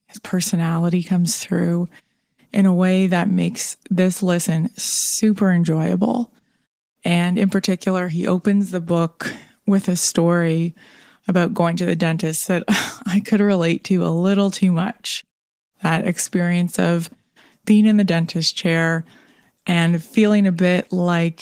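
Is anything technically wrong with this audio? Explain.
No, nothing in this speech clip stood out as a technical fault on listening.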